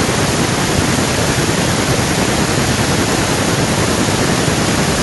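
A speech recording with echo with no canceller throughout: the far end's microphone picks up its loudspeaker and nothing strips that signal out, so every phrase returns around 0.4 s later as a thin copy about 18 dB below the direct speech.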